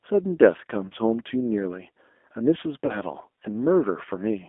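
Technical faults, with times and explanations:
Throughout: G.729 codec, a low-bitrate 8 kbit/s VoIP coder that resynthesizes speech roughly, leaving it slightly synthetic; the spectrogram shows a band of about 250 Hz to 3.5 kHz, with nothing above.
0.88–0.93 s: VoIP packet loss concealed by the speech codec. About 30 ms was missing and the decoder extended the previous sound into a fading buzzy tone or coloured noise, visible as smeared, decaying energy.
2.86–2.99 s: VoIP packet loss concealed by the speech codec. Again about 30 ms was lost; the extrapolated sound fades and recovery is slow, so the waveform stays weak for roughly 130 ms.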